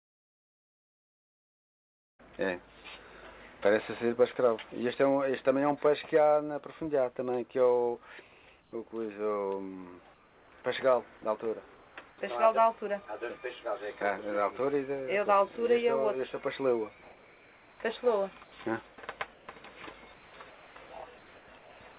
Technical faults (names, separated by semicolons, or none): comfort noise in place of the background; sound dropped by the voice detector; sound chopped by the voice detector